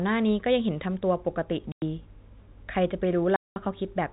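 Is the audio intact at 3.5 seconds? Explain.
No. Packet loss filled with silence cuts a 200 ms hole from 3.36 to 3.56 s, consistent with ten 20 ms packets, leaving abrupt silence with hard edges.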